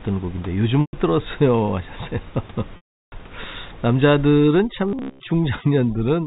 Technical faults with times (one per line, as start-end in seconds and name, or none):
0.81-0.93 packet loss with pitch repetition
2.76-3.12 packet loss with pitch repetition
4.27-6.26 overdone noise removal
4.88-5.21 robotic sound from repeated short buffers